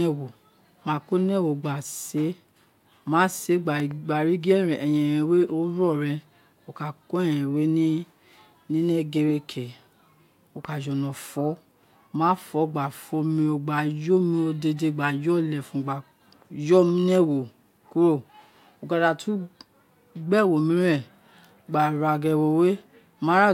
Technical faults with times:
3.80-3.93 loud pop
10.65-10.67 loud pop

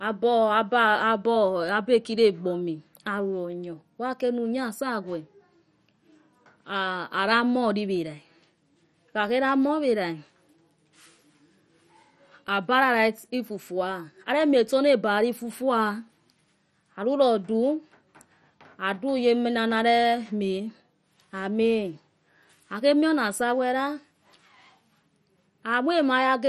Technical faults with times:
0.00-26.49 MP2 compression

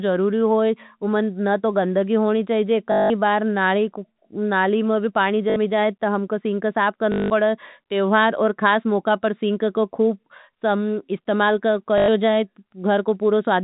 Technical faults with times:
2.92-3.10 packet loss with last packet repeated
5.50-5.56 packet loss with last packet repeated
7.12-7.30 packet loss with last packet repeated
11.98-12.08 packet loss with last packet repeated

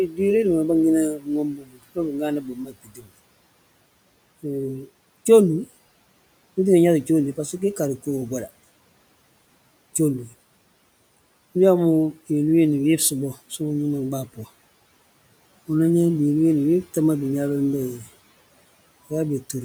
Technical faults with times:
0.07-0.19 speech cut by the noise suppressor
1.15-2.15 speech cut by the noise suppressor
2.40-3.10 speech cut by the noise suppressor

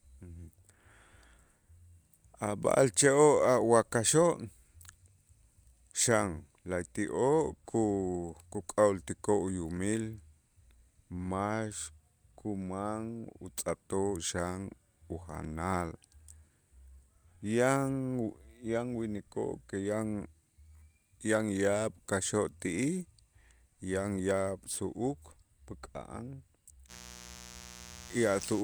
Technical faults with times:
26.87-28.63 mains buzz

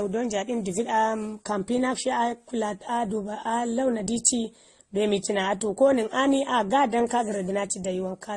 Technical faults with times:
0.00-8.37 transcoding between lossy codecs

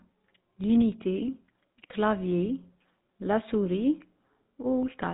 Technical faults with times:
0.00-5.14 GSM full-rate codec

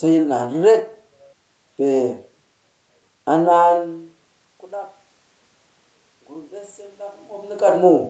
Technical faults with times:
6.27-7.69 automatic gain rising

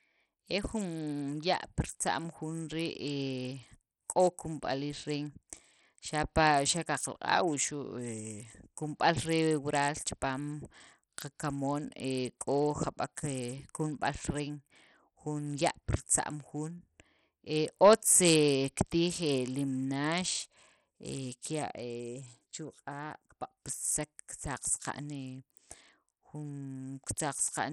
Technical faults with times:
0.00-27.72 Bluetooth SBC compression

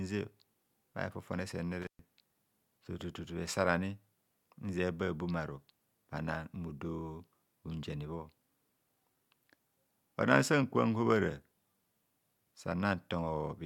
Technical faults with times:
1.82-1.99 intermittent contact

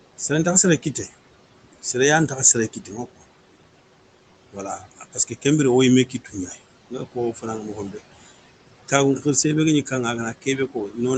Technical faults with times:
0.00-11.18 noise suppressor artifacts
2.28-3.22 speech cut by the noise suppressor
4.52-5.45 speech cut by the noise suppressor
6.06-6.57 speech cut by the noise suppressor
6.90-8.00 speech cut by the noise suppressor
10.41-10.98 speech cut by the noise suppressor

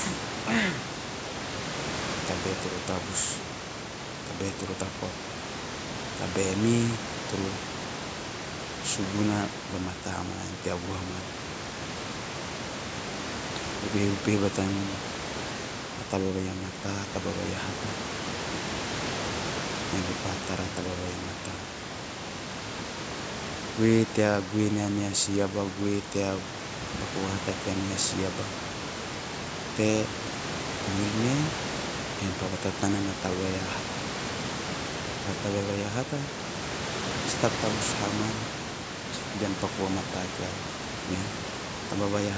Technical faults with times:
none

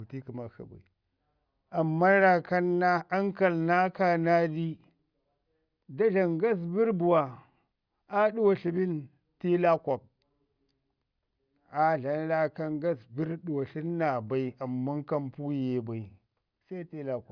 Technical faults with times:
none

